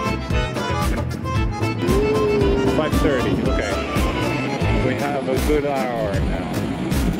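From 4.2 s to the end at 7.19 s, a time-stretched section slows the audio to about 0.68 of its pace while pitch holds steady, likely from software repeating short pieces to lengthen it. It drags abruptly; a spectrogram shows stretched events at unchanged frequencies.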